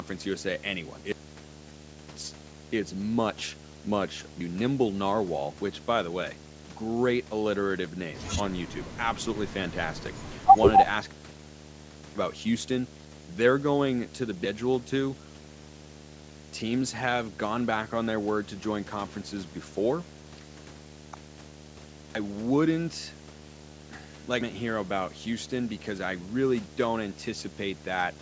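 A steady 75 Hz buzz with a fizzy hash on top runs under the speech from start to finish, fairly loud though below the voice. This is video or display buzz: a screen or its cable is leaking its field-rate interference into the audio path.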